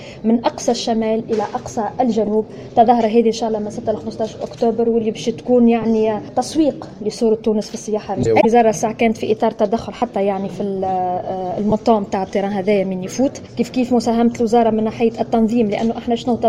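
A brief rough blip at 2.27 s, then a slightly longer grainy patch from 5.82 to 5.84 s, mark lost LE Audio frames. The worst, from 9.97 to 10.02 s, smears into noisy hiss that sags in level. Another short smear follows at 11.70 to 11.72 s. The gaps run 7.5, 15, 45 and 22.5 ms, which fits whole 7.5 ms LC3 frames dropping out. The decoder filled each gap by repeating the last spectrum with scrambled phase, fading it once a gap ran past the first few frames, so tones turn to noise. The light codec coding leaves at most a faint watery texture.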